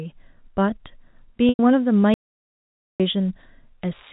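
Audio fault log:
1.49–1.59 s, packet loss with pitch repetition: about 100 ms of audio went missing, which fits a run of roughly ten small packets, and the receiver covered the hole by looping the last pitch period of the speech. So instead of a gap you get a brief, slightly buzzy held tone that fades down before the real signal cross-fades back in.
2.14–3.00 s, audio dropout to silence: the sound just stops dead for about 0.86 s and then picks up again mid-flow. The gap is silent, with no room tone or background hiss, which means the input itself went away and the recorder kept writing silence, most likely a link or device dropping out briefly or a momentary mute. Whatever was said in that stretch is simply gone.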